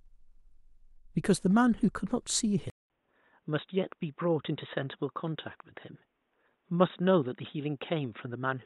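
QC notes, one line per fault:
2.7 s to the end, input switched to a poorer device: after a silence of 200 ms the speech turns dull and boxy, with nothing above 3.8 kHz, the level drops by about 5 dB, and a new background noise sits far below the speech, around 50 dB down. The cause is likely a mid-recording change to a lower-quality microphone or a headset call profile, whose narrower band, own tone and own noise floor replace the original input.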